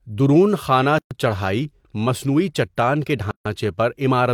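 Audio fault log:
0.98–1.11 s and 3.31–3.46 s, gap at a join of encoded pieces: speech cuts to silence (124 ms, 145 ms), then resumes; untrimmed encoder delay and padding.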